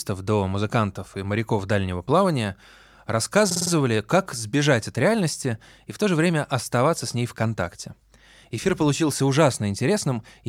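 At about 3.49 s there's a stutter of repeated frames, running until roughly 3.70 s, just before "как сбежать от реальности". A short block of about 52 ms, which fits a run of two compressed frames, got played four extra times, so the decoder keeps looping the same sliver. You hear it as a quick machine-gun stammer, and the clip ends up about 209 ms longer.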